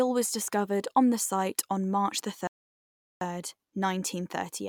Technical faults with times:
2.47-3.21 playback stall

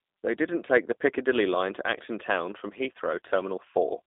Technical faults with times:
0.00-4.07 G.729 codec

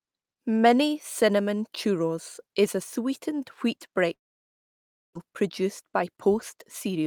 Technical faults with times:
4.13-5.17 long network dropout

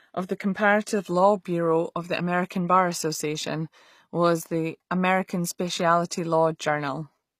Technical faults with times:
0.00-7.40 HE-AAC compression

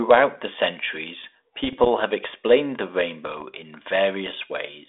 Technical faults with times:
1.64-1.87 bit errors on an ADPCM link
3.27-3.43 bit errors on an ADPCM link

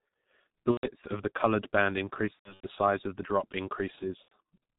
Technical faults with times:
0.00-4.79 G.723.1 codec
0.71-0.89 VoIP packet loss concealed by the speech codec
2.33-2.67 VoIP packet loss concealed by the speech codec
4.22-4.32 VoIP packet loss concealed by the speech codec

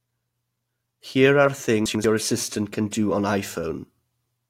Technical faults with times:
1.86-2.04 chunks out of order

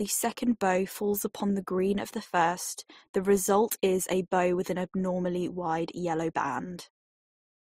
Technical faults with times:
0.00-7.70 transcoding between lossy codecs

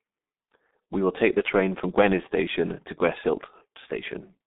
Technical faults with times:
0.00-4.47 G.723.1 codec

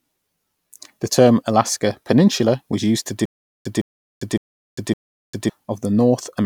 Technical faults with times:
3.25-5.50 stutter with silent gaps

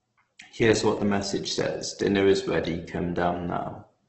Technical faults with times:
0.00-4.08 Opus compression

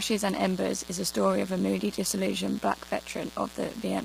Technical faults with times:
0.00-4.05 mains buzz
0.00-4.05 low-delay AAC compression

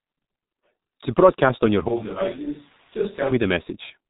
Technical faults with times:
0.00-4.10 G.723.1 codec
1.89-3.31 switch to a distant microphone

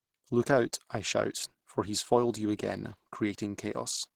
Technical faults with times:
0.00-4.15 Opus compression

